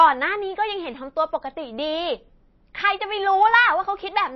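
Throughout the speech, nothing sounds above about 5.8 kHz, and a watery, swirly quality is plainly audible. This is likely MP3 compression at a low bitrate, near 24 kbps.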